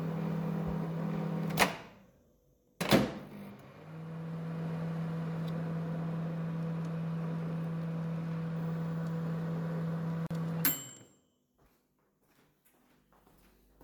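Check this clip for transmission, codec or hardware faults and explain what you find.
One codec fault appears. From 10.27 to 10.31 s there is a gap at a join of encoded pieces: separately encoded sections were joined untrimmed, so encoder delay and end padding leave a 41 ms gap with smeared edges. Unlike a dropout, the sound resumes exactly where it stopped.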